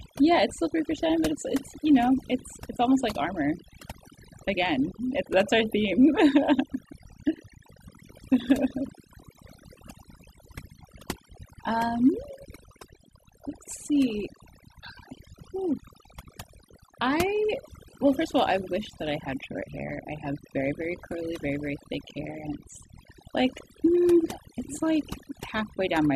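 Throughout the speech, overdone noise removal has pulled bands near the estimated noise floor down hard, taking quiet vocal detail with them. The background drops and breaks up into twinkling specks. A spectrogram shows scattered isolated dots between phrases and holes within the voice.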